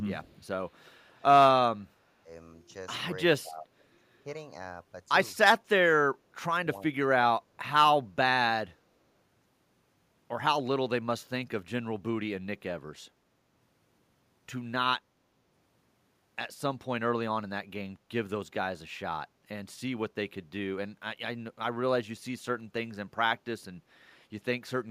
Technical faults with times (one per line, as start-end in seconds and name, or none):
0.85-1.23 echo leak
3.42-3.74 speech suppressed in double talk
3.80-3.84 echo leak
6.06-8.13 speech suppressed in double talk